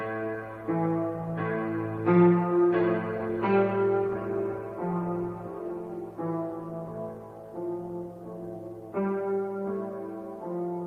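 No technical faults can be heard anywhere in the recording, and the signal stays stable and intact throughout.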